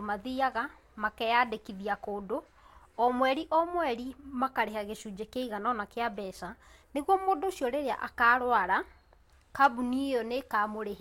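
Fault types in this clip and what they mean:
No technical faults can be heard in this speech recording. There is nothing here to list under any fault heading.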